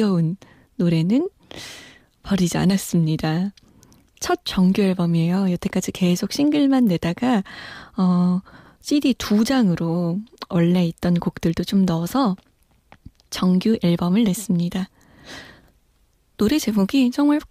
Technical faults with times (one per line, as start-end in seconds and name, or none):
none